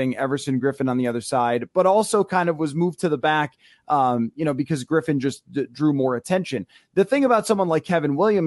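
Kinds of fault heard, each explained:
No faults detected; the speech shows no audible technical defect.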